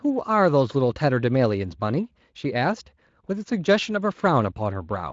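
No technical faults can be heard anywhere in this speech clip. It has passed through the Speex codec at what sounds like a fairly high quality setting, with only light coding texture and nothing above about 7.6 kHz.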